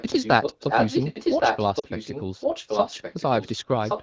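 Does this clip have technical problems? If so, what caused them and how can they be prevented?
Yes. A delayed copy of the speech sits under the live talker from 0.0 to 2.22 s, 2.4 to 3.24 s, 3.4 to 3.57 s and 3.85 s to the end. This is echo leak, likely from a far-end loudspeaker whose echo canceller let part of its microphone pickup return down the line. What separates it from reverberation is the fixed lag of about 1.12 s: the repeats are distinct and late rather than a smeared tail. In the first two stretches the echo is roughly as loud as the speech. It is about 15 dB down in the third and about 5 dB down in the last. Preventing it means using a headset at the far end, or a properly tuned echo canceller with enough tail length for that delay.

Inside the first echo stretch, from 1.79 to 1.87 s, the sound briefly drops to near silence before recovering. These are lost AMR speech frames. 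About 40 ms went missing, which fits two 20 ms frames failing their checks, so the wideband decoder repeated its last pitch and vocal-tract settings at falling gain. It differs from a plain dropout because the sound fades out rather than being cut, and the voice comes back weak or rough for a moment. Better radio coverage or stronger channel protection would prevent it.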